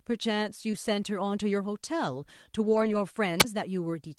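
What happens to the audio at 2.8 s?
Around 2.8 s there is a lost packet rebuilt from error correction, from 2.65 to 2.95 s. Lost audio was replaced with low-bitrate backup copies carried in later packets, so nothing drops out, but the patched stretch sounds rougher and noisier. There are about eight rebuilt packets covering roughly 160 ms. The waveform stays continuous with no gap, while the spectrogram shows a grainier, noise-smeared patch where the detail coarsens.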